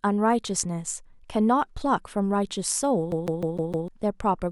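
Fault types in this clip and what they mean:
CD stuck on one turn: A scratch makes the laser jump back one track at the same point on each revolution, so a short stretch of the disc is read over and over. In this speech clip it runs from 3.12 s to 3.88 s, where a 0.15 s slice of audio repeats five times, each pass separated by a brief mute at the jump. The result is the rapid, evenly spaced stutter typical of a skipping CD.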